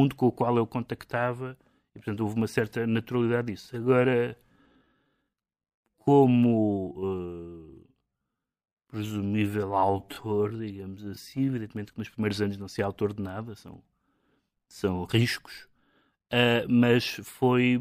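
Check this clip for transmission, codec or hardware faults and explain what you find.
One fault stands out: a time-stretched section from 3.56 s to 11.52 s, starting right after "houve uma certa naturalidade" and ending just before "que nos primeiros anos". Over those eight seconds the speech suddenly runs at about 0.64 times its normal pace while its pitch stays where it was. The likely cause is software lengthening the passage by repeating short slices of the waveform to hold pitch, which leaves the slowed speech sounding drawn out.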